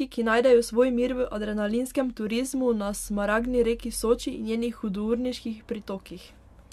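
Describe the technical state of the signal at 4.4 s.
The signal at 4.4 s is intact, with no fault audible at that moment.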